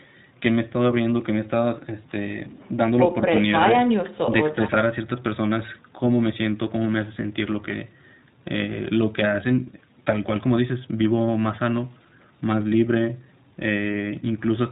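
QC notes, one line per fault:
Throughout, iLBC codec: the speech is capped hard at 4 kHz and sounds a little rough and synthetic, since each roughly 20 ms frame gets coded on its own with no help from the one before; the plainly audible grit fits iLBC's 15.2 kbps mode.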